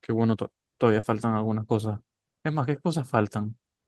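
Around 0.99 to 1.05 s there's a short concealed packet loss: about 40 ms of audio never arrived, so the decoder stretched the preceding sound to cover it, leaving a quick smear before the speech resumes. The call path itself sounds Opus-coded, topping out near 12 kHz.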